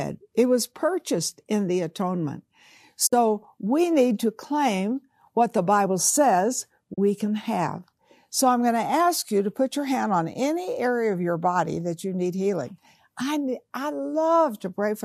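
AAC frame loss with muting: at 3.07 to 3.13 s, just before "we need to claim", about 60 ms of frames went missing and the decoder zeroed their spectrum. The speech fades out and back in around a soft-edged hole. The same happens at 6.94 to 6.98 s, a 40 ms gap just before "can have". Both gaps fit runs of the short, roughly 10 ms frames of the light low-delay AAC coding, likely AAC-ELD.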